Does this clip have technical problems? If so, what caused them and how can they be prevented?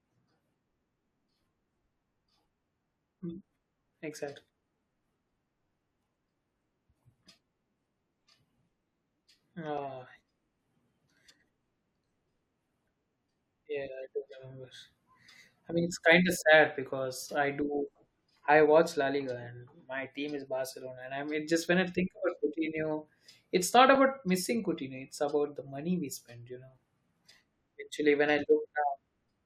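Yes. At 9.78, 23.95 and 27.32 s a block of digital silence appears: each time an output buffer was left as zeros for 5.33 ms, which fits a 256-sample buffer. The speech cuts to silence and back with no fade, so each gap is heard as a brief tick. Giving the audio thread more headroom, through a larger buffer or less processing per callback, would prevent these dropouts.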